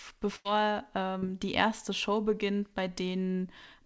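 From 0.36 to 0.47 s the speech stalls into a held, fading sound for about 88 ms before picking up further along, with about 80 ms of speech gone. That is a burst of packet loss: consecutive packets were lost or arrived too late, so the receiver stretched the last sound and faded it.

At 1.19 to 1.24 s a brief smear replaces the sound, lasting about 35 ms and taking about 40 ms of real audio with it. This short concealed packet loss was patched by extending the preceding sound and then cross-fading back. Everything here sits below 8 kHz, as expected from the call's G.722 codec.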